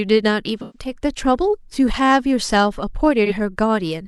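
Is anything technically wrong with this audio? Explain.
Yes. From 0.62 to 0.91 s and again from 3.25 to 3.32 s the speech turns smeared and noisy, with a phasey blur. This is AAC frame loss with concealment: the decoder patched the gaps from the last good spectrum, the first gap fitting about three lost frames and the second about one.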